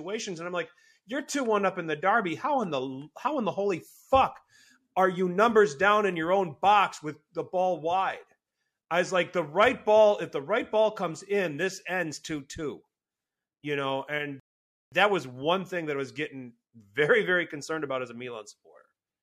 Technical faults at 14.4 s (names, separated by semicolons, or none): rebuffering stall